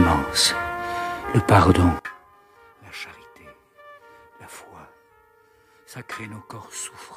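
From 1.99 s to the end, the sound abruptly collapses to a faint residue, roughly 24 dB quieter than before, as if most of it has been hollowed out. The likely cause is one channel inverted: one side of the stereo pair has flipped polarity, so when the two channels are combined into mono, everything they share cancels. Only the small difference between the left and right channels remains, which is why so little is left.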